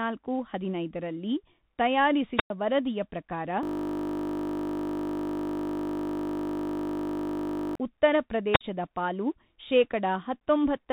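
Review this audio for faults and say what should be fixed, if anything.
Bluetooth CVSD headset codec throughout: the speech is band-limited with nothing above 3.8 kHz, fitting a 64 kbit/s CVSD link. Sibilants sound scratchy over granular hiss, and a spectrogram shows an empty band above 3.8 kHz. Prevention: record through a wired or wideband microphone instead of the headset's call profile.

Wireless microphone squelch dropout at 2.35–2.50 s and 8.52–8.61 s: the radio signal faded and the receiver muted for about 105 ms and 50 ms, shown as near-flat waveform gaps edged by hiss. Prevention: keep the transmitter in clear line of sight, with fresh batteries and sensible squelch settings.

System hang loop from 3.63 to 7.75 s: the system froze while the hardware replayed one 20 ms buffer, producing a steady 50 Hz buzz, visible as identical repeating waveform cycles and evenly spaced spectral lines. 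Prevention: fix the driver or system stall so the audio buffer keeps getting refilled.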